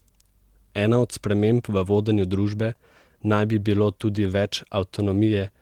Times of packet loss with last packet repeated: none

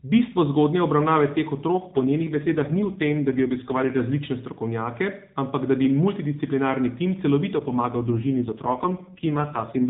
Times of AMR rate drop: 1.72-4.01, 7.56-9.90

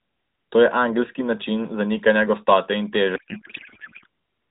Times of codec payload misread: 3.16-4.06

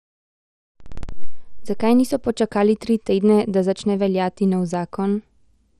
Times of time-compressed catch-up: none

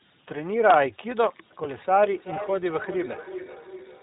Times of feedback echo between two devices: 1.96-4.03

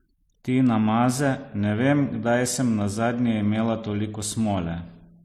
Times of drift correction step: none

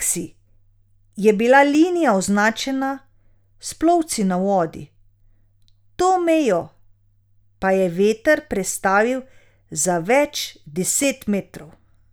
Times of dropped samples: 1.75, 8.56, 11.04

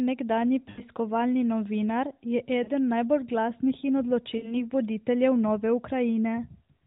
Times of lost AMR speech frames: 0.70-0.82, 2.64-2.71, 4.38-4.55

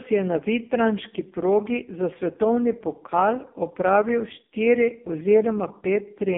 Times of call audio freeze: none

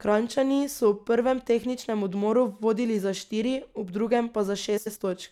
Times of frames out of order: 4.77-4.97

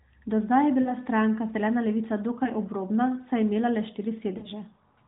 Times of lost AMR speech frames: 0.82-0.93, 2.44-2.49, 4.38-4.48

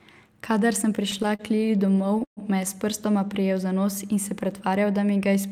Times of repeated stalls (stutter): 0.95-2.39

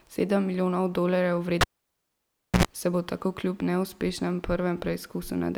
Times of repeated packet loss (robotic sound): none

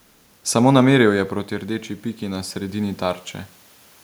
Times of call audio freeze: none

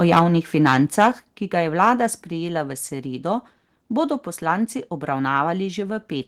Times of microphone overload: 0.12-0.22

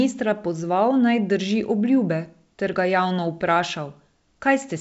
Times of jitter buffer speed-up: none

